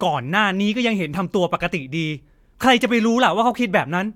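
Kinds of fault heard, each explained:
No technical fault can be heard anywhere in the speech; the signal stays continuous throughout.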